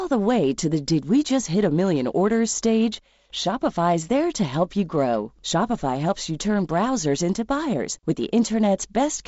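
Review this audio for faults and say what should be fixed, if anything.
No faults heard here; nothing needs fixing.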